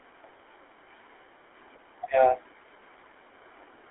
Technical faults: GSM full-rate codec

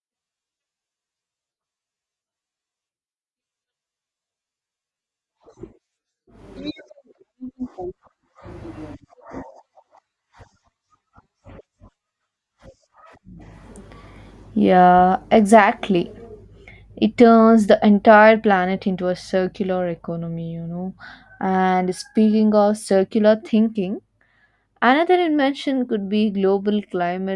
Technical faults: none

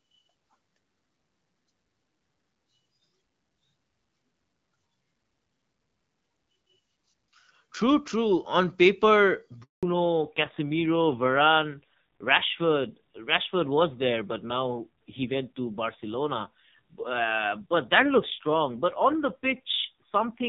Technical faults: handover gap; fallback to narrowband

